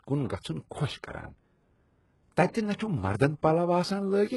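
Throughout the speech the treble sounds bright but synthetic, with gritty, lispy s sounds and nothing above 11.5 kHz. This is likely HE-AAC compression at a very low bitrate, consistent with about 12 kbps, rebuilding the upper band from copied lower bands whose harmonics don't align.

From 2.75 to 2.79 s a short hiss runs ahead of an attack, leaving it soft and smeared. This is pre-echo: quantisation noise sized for the loud onset spreads across the codec block into the quiet 44 ms before it.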